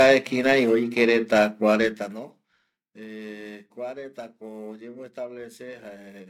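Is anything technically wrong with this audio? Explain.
Yes. Periodic clock jitter runs through the whole clip: interference is shaking the converter's sampling clock at around 1.5 kHz, so every component of the speech gains sidebands spaced about 1.5 kHz above and below it. This gives a rough, metallic edge that is strongest on the higher frequencies and disappears in the pauses.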